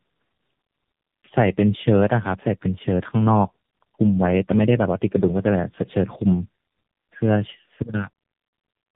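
Tandem speech coding runs through the whole clip. The speech appears to have crossed two low-rate speech codecs in a row, likely an 8 kbit/s G.729A link followed by AMR-NB at about 6.7 kbit/s, with a G.711 hop between them. Each coder rebuilds an approximation of the speech from the previous one's already degraded output, so the errors stack. Nothing is present above 3.7 kHz, and the speech sounds rough, muffled and warbly.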